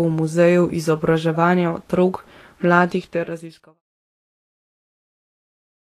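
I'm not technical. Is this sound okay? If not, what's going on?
No. The speech sounds hissy and grainy throughout, with nothing above about 14 kHz. That is likely Vorbis compression, squeezed too hard. The smooth fade-out from about 2.5 to 3.82 s is intentional.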